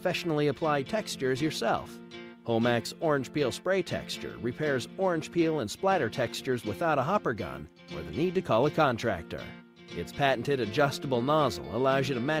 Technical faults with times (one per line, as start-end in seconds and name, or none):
none